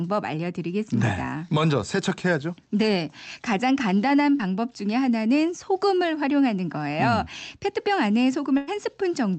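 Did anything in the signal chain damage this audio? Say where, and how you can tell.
Yes. At 4.37 to 4.41 s there is a short concealed packet loss, damage from the network stage. About 20 ms of speech never arrived, and the decoder covered it by extending the preceding sound before crossfading back into the real signal, which is heard as a brief smear. On a spectrogram the harmonics or noise just before the gap are stretched flat across it, with no new onset. The waveform shows a smooth, repetitive patch in place of changing detail.

A burst of packet loss follows at 8.57 to 8.69 s, also network damage but longer. Roughly 100 ms went missing, and the receiver kept generating the last sound while turning it down, so the audio becomes a decaying held tone or hiss before speech jumps back in further along. The spectrogram shows frozen, fading bands with an abrupt resumption, below the 8 kHz ceiling of the Opus call path, and the waveform shows a tapering envelope rather than a silent gap.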